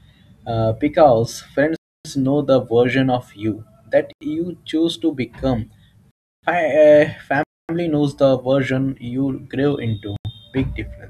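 Five blocks of digital silence cut through this speech clip: 1.76 to 2.05 s, just before "know the version of"; 4.13 to 4.21 s; 6.11 to 6.43 s, right after "you choose to become"; 7.43 to 7.69 s, before "knows the version you"; and 10.16 to 10.25 s. The signal drops straight to silence and back with no fade. The two short 85 ms gaps fit a 4096-sample buffer that wasn't filled in time. The longer ones, around 0.26 to 0.32 s, sound like real holes in the audio.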